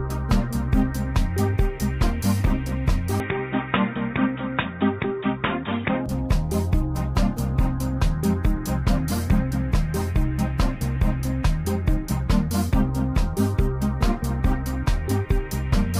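From 3.2 to 6.06 s the sound dulls, likely from an input switched to a poorer device; spectrogram content stops at 3.8 kHz and the waveform shrinks by about 5 dB.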